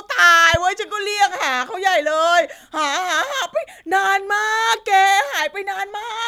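It's a short speech clip with one loud pop right near the start, from 0.54 to 0.57 s, a single sharp click sitting a few dB above the voice while the speech carries on underneath. That's likely a voltage spike from a plug, switch or static discharge.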